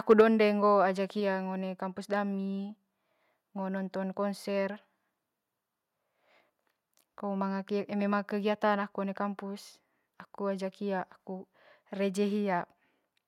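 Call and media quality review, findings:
Microphone overload, 0.10–0.21 s: harsh, crackly edge on the loudest peaks, tops flattened. Likely input gain set too high, driving the converter about 3 dB past full scale and clipping a few percent of samples. Distortion sits only on peaks, unlike codec noise.

Microphone volume stepped down, 0.21 s: speech and background drop together by about 3 dB in one step, right after the clipped burst. Likely call-software gain control cutting device input. The sudden stepped drop distinguishes it from a gradual fade or limiter ducking.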